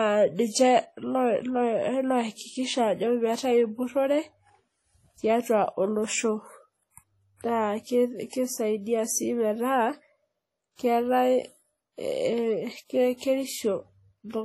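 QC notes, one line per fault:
Throughout: WMA compression. The speech has a ringing, washy quality with a hiss that swells and fades with the level of the sound, and there is nothing above 15.8 kHz. This points to a transform codec whose long blocks smear quantisation noise over tens of milliseconds and zero out weaker spectral detail. That is likely heavy WMA compression at a low bitrate, something around 32 kbps.
7.36 s to 7.41 s and 13.17 s to 13.21 s: pre-echo. A brief hiss arrives just ahead of a sharp onset, about 44 ms before the first and 38 ms before the second, and both attacks sound softened and smeared. Each attack falls late in a coding block, so the noise budgeted for the loud part spreads back into the quiet moment before it.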